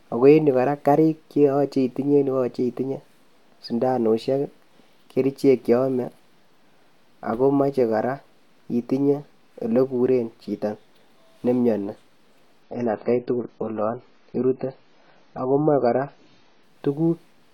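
A speech recording in which the adaptive stream switched to a lower bitrate from 12.63 s to 16.63 s, as the player briefly fell back to a cheaper encoding when the connection slowed. The switch is abrupt and leaves no gap: for those four seconds the treble vanishes above 7 kHz and codec artefacts thicken. The degradation fits an AAC stream dropping from around 96 kbit/s to roughly 16 kbit/s before full quality snaps back.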